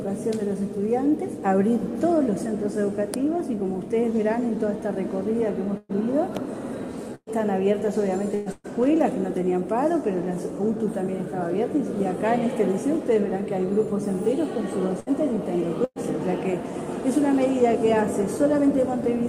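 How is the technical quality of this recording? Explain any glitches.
The recording has six bursts of packet loss. They fall at 5.77, 7.15, 8.35, 8.52, 15.00 and 15.84 s. In each, about 120 ms of audio is missing, or about 60 ms at 15.00 s. The receiver fills the gap by extending the last sound and fading it. That gives a brief held buzz or hiss. Some gaps end with up to 50 ms of silence. The sound then resumes, with the missing part skipped over.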